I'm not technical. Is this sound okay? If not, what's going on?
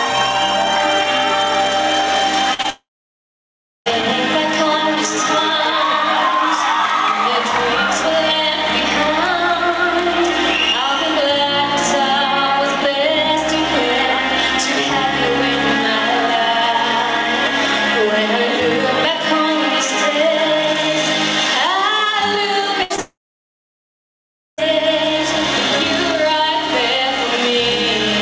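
No. There are four separate problems.

Throughout the clip you can hear gain pumping. The level is pulled down each time something loud happens, so the overall level keeps breathing up and down. The likely cause is that the input gain is set much too high and an automatic limiter keeps pulling it back down. The swings are moderate, and they make loud and quiet parts sound squashed together.

At 2.54 to 2.60 s and again at 22.83 to 22.92 s there is a burst of packet loss. A chunk of the transmitted sound never arrived. The receiving end covered the hole by stretching out the last bit of sound it had, so you hear a short held buzz or hiss that fades. When the sound resumes, a piece is missing: under a tenth of a second in the first case and close to a tenth in the second.

Right after each burst comes a short concealed packet loss, at 2.62 to 2.66 s and at 22.96 to 23.00 s. These gaps are tiny, a few hundredths of a second each. 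They were patched the same way, but so briefly that they come across as a quick smear or wobble rather than a gap. Any very short sound at those moments can drop out entirely.

Each of those moments then turns into a long network dropout. The first runs from 2.70 to 3.88 s and the second from 23.00 to 24.60 s. In each, the filled-in sound fades out quickly and leaves silence for about 1.0 s and 1.4 s respectively. The sound then resumes further along, and whatever happened in between is gone. The likely cause is the connection stalling completely for that stretch. The call link itself carries nothing above 8 kHz, which gives the whole clip a slightly dull top end.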